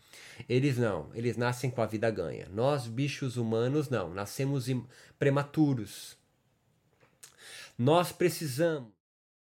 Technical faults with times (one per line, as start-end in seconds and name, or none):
none